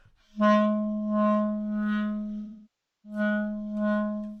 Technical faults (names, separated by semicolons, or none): AAC frame loss with concealment